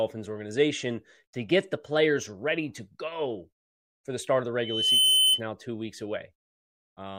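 From 4.60 to 5.41 s, loudspeaker feedback squeal: the microphone re-amplifies its own loudspeaker, and a 3 kHz tone swells over about 0.4 s to roughly 10 dB above the speech.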